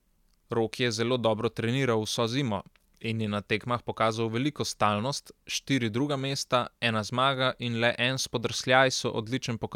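A careful listen to this speech recording turns up nothing that stands out as a technical problem.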